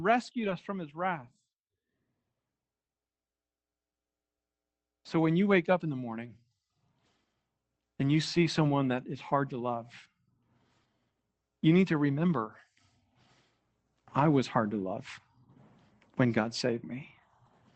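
From 0.39 to 0.53 s, just before "from his wrath", a lost packet is rebuilt from error correction. Low-bitrate copies fill the gap, sounding rougher and noisier, consistent with four lost packets.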